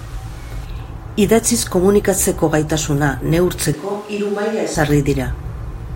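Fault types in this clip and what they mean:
Switch to a distant microphone: from 3.73 to 4.75 s the voice suddenly goes roomy and hollow and loses its low end, then snaps back just as abruptly. It drops by roughly 5 dB, and the room noise comes up to sit only about 25 dB under the speech. That's likely the close mic cutting out and a far-off one, like a camera mic, covering the gap.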